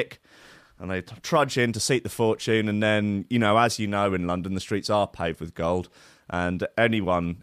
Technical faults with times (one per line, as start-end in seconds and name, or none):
none